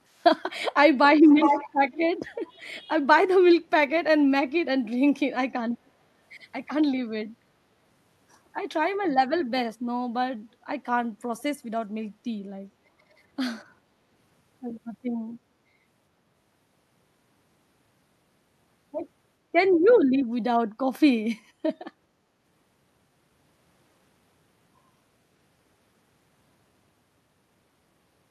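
At 0.14 to 0.24 s, 1.19 to 1.73 s, 1.91 to 1.98 s and 2.56 to 2.67 s the speech is shadowed by an echo leak, a copy lagging by 0.41 s, likely from a loudspeaker echo canceller letting residue through. It is nearly inaudible in the first and last, clearer at 1.91 s, and strongest at 1.19 s. A spectrogram shows faint, smeared repeats of earlier harmonic patterns offset in time, and the waveform shows a weaker duplicate envelope.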